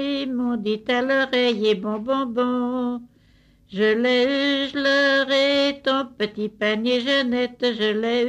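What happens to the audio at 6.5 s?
Nothing goes wrong at 6.5 s; the audio carries on intact through that moment with no dropout, click, distortion or other fault.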